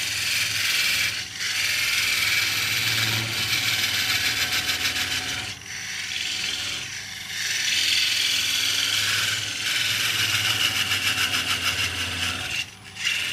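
Nothing stood out as a technical fault on listening.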